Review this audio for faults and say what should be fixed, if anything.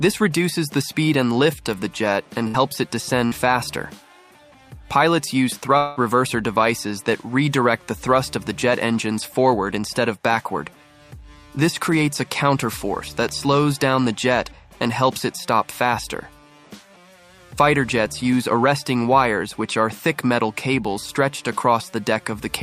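Electrical switching spike at 1.73 s and again at 13.29 s: each is a very brief sharp snap, sitting on top of the sound rather than replacing it. This is likely a nearby switch, relay or static discharge arcing and coupling into the audio line as a brief voltage jolt. Shielded, balanced cabling kept away from switched mains loads, with suppression on the offending switch, would prevent it.

Burst of packet loss at 2.47 to 2.57 s and 3.26 to 3.34 s: in both places the sound stalls into a continued, fading imitation of what came just before, held for about 65 ms in the first case and 55 ms in the second. It then picks up again further along, with roughly 60 ms of the original missing each time. The receiver had no data for those few packets and filled the hole by stretching the last audio. A larger jitter buffer or forward error correction on the link would prevent it.

Long network dropout at 5.77 to 5.99 s: the sound is replaced by a drawn-out, decaying continuation of the preceding audio for about 184 ms. 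It never falls to silence before the stream resumes, and about 180 ms of material is skipped. This is likely a longer interruption in delivery that the receiver bridged entirely with concealment. Prioritising the audio stream on a more stable connection, or recording locally as a backup, would prevent it.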